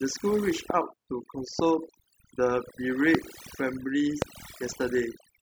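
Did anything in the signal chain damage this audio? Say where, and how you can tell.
Yes. Overdone noise removal runs through the whole clip, a call-processing stage set far too aggressively. Pauses between phrases drop to near silence speckled with twinkling artefacts, and quieter frequency bands of the voice fall below the noise estimate and are cut away along with the background.

A loud pop occurs four times, at 0.70–0.72 s, 1.59–1.62 s, 3.15–3.17 s and 4.22–4.24 s, each a single sharp click roughly 15 to 20 dB above the speech, which continues unbroken beneath it. These are likely voltage transients from a plug, switch or static discharge in the analogue wiring.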